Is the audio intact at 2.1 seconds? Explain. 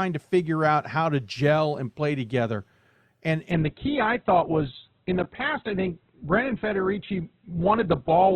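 Yes, the speech at 2.1 seconds is intact, with no audible fault at that moment.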